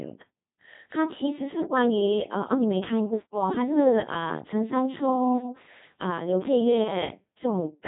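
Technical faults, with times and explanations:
Throughout, Codec 2 vocoder: the speech has the robotic, buzzy character of a very low-rate vocoder, consistent with a 2.4 kbit/s mode. Only pitch, voicing, energy and a coarse spectral envelope survive, and the decoder rebuilds the sound from sine waves, so the original waveform is not preserved and the damage is heavy. A spectrogram shows evenly spaced, overly regular harmonics with smeared formants and nothing above 3.8 kHz. The waveform looks synthetic rather than like the natural speech shape.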